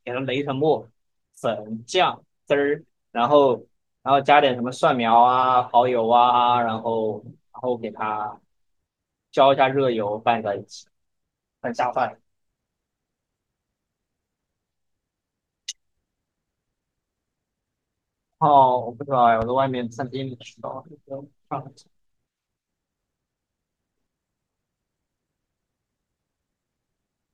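At 19.42 to 19.44 s a single loud pop sits on top of the speech, peaking a few decibels above it. A brief voltage step, likely from a switch, static discharge or driver glitch, entered the chain, and the speech continues uninterrupted beneath the thump.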